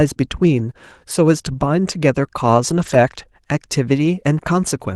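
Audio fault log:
2.69–2.95 s and 4.05–4.07 s, lost packet rebuilt from error correction: no gap, but the audio turns briefly rougher and noisier where the decoder plays low-bitrate backup copies in place of the missing packets.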